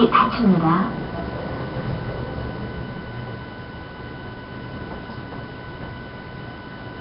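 Sounds, rough, hissy and smeared throughout, with nothing above 5.3 kHz. Heavy Nellymoser compression is the likely cause, filling starved bands with noise.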